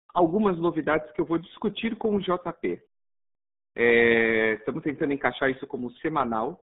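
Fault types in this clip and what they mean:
RealAudio 14.4 codec: an early dial-up-era speech codec that squeezes the signal into a very small data budget, and the sound here fits a rate of about 8 kbit/s. Throughout the clip the speech is confined to a band from about 150 Hz to 3.7 kHz, with nothing above 3.8 kHz, and the heavy coding damage leaves it muffled and gargly. A plain telephone band-limit would sound just as narrow but clean. The gargle inside the band is what marks this codec.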